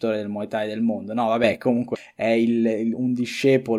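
A digital gain change applied without any ramp is the likely cause of the sudden gain jump in this speech clip. From 1.44 s to 1.57 s the level rises abruptly by about 6 dB, with speech and background noise stepping up together and then dropping back. Damaged data in the compressed stream follows: corrupted bytes make the decoder misread frames and lose sync while it hunts for the next valid header. Between 1.92 s and 1.96 s this is heard as a brief glitch.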